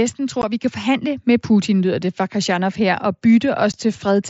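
At 0.42 s and again at 3.72 s the speech cuts out for about 15 ms. This is unconcealed Bluetooth headset packet loss: audio travelling between headset and phone went missing, which fits two lost packets each time, and nothing was generated to cover the hole. Each gap is heard as a short hole with abrupt edges. On the waveform it appears as a flat stretch with squared-off edges, and on the spectrogram as a thin vertical blank cutting across the mSBC band up to 8 kHz.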